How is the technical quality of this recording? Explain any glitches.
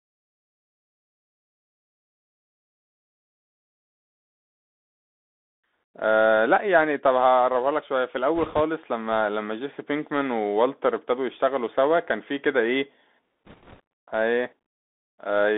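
The technical quality is poor. The whole recording carries a plainly audible Bluetooth CVSD headset codec, and two short bursts of bit errors hit it.

The CVSD codec runs throughout. Its one-bit delta coding fits a 64 kbps headset link. The band sits between 250 Hz and 3.6 kHz. The speech sounds thin and boxed. S sounds turn scratchy, and a granular hiss runs underneath.

Bit errors on a Bluetooth voice link occur from 8.36 to 8.61 s and from 13.45 to 13.80 s. Flipped bits each nudge the waveform slightly and then fade, so there are no loud clicks. The result is rushing crackle, heavier in the second burst, where the error rate is about 4 percent against about 2 percent in the first.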